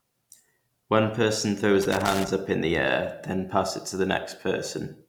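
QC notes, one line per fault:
1.82–2.28 s, loose connector crackle: a worn or dirty contact in the signal path keeps making and breaking for about 0.46 s between "person throws" and "up in the air", chopping the speech signal into an irregular, scratchy burst of crackle.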